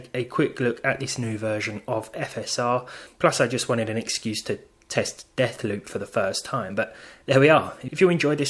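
Nothing in the audio stood out as a technical problem on listening.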